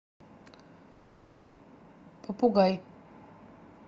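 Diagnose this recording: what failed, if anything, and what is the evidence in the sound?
From 0.91 s to 1.59 s the speech stops and is replaced by a synthetic continuation of the last sound: a buzzy, hissy tail that fades, with no true silence. Speech resumes at 1.59 s with about 0.66 s missing. This is likely a long network dropout on the Opus call path: the jitter buffer ran dry and packet-loss concealment filled the whole gap.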